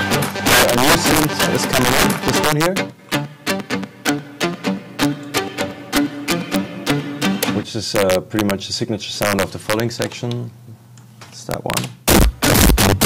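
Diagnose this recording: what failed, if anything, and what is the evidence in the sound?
Violent cracks burst from the loudest peaks throughout: integer overflow at the sample-format conversion. Gain about 11 dB too hot wraps a small fraction of samples to the opposite extreme.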